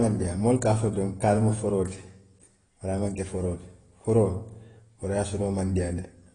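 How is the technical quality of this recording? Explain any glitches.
The recording has compression damage throughout. Transcoding between lossy codecs likely explains it: nothing is heard above 10.2 kHz, and two different kinds of smearing and warbling overlap. A single codec would leave only one texture.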